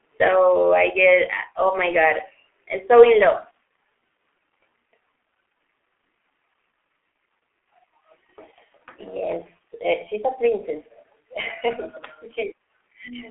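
Throughout the speech, the G.723.1 codec leaves it muffled and hoarse, with nothing above 3.8 kHz, consonants smeared and a slow-updating voice model, which fits a bitrate near 6 kbit/s. Heavy coarse roughness, not just the narrow 300 to 3400 Hz band, separates it from plain telephone filtering.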